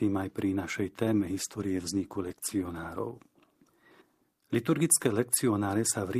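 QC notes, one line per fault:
1.05–2.75 s, call bitrate drop: the speech turns rough and watery for about 1.6 s, which fits the encoder falling from 32 to 17 kbps and coding more coarsely. On a spectrogram, harmonics look smeared and patchy until the rate recovers.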